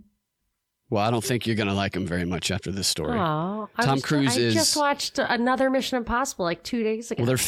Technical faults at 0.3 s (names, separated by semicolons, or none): none